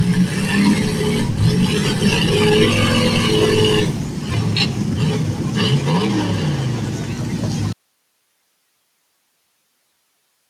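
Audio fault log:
Throughout: noise suppressor applied to music or sounds. A speech-tuned suppressor treats held tones and tails as noise. Their level dips by roughly 5 dB, so the sound pumps and thins.
7.73 s to end: audio dropout to a faint residue. The sound cuts out abruptly and only hiss remains, about 50 dB below the signal. This is likely a lost input with the path still live.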